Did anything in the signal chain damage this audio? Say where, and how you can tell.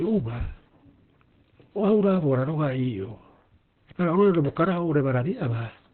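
Yes, at the codec stage, throughout the clip. This speech is muffled and hoarse, with nothing above 4.2 kHz. That points to Opus compression, likely a low-bitrate encode around 12 kbps in SILK speech mode, which narrows the bandwidth and roughens the voice.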